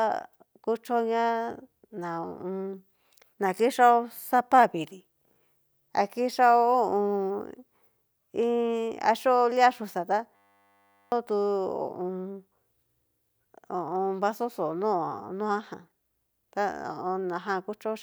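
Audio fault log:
10.36–11.12 s, system hang loop: the speech gives way to a steady buzz pitched at 100 Hz, because a single 10 ms slice of audio repeats exactly, back to back, 76 times. The driver or system stalled while the sound hardware kept replaying the same small ring buffer, which points to a buffer of about 10 ms. About 0.7 s of the real speech never arrives and is replaced by the buzz.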